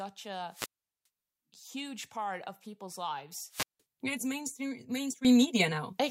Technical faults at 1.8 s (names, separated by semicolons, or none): none